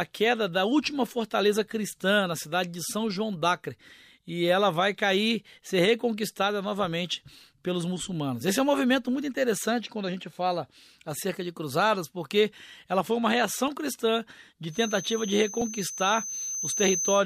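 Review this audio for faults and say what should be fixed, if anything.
A feedback whistle enters at 14.67 s, just after "foi uma reação cristã", and continues to the end of the clip at 17.25 s. It is a thin, steady tone at 6.2 kHz, sitting roughly 10 dB below the speech and swelling and fading slowly in level. The likely cause is a loudspeaker-to-microphone loop running just under the point of runaway, so that one frequency keeps ringing. To prevent it, reduce monitor gain or add a notch filter at 6.2 kHz.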